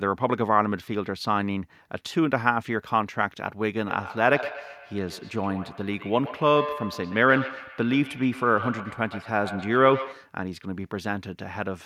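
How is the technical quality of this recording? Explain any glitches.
The recording has one clear problem, a feedback echo between two devices running from 3.85 s to 10.38 s. During that stretch a second device in the same room is playing back the call while this microphone is live, so the sound loops out of one speaker and back into the other microphone. Each echo canceller only removes its own playback, so the loop survives. Every sound returns roughly a tenth of a second later, peaking at about 11 dB below the speech.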